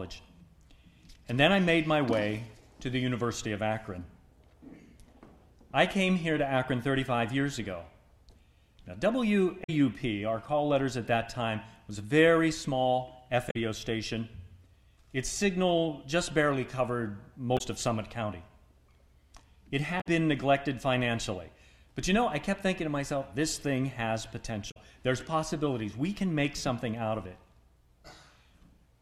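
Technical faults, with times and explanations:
9.60–9.70, 13.47–13.56, 17.54–17.61, 19.97–20.07 and 24.67–24.77 s, damaged data in a compressed stream: short garbled blips where the decoder misreads corrupt frames and hunts for sync, unlike a dropout's plain silence.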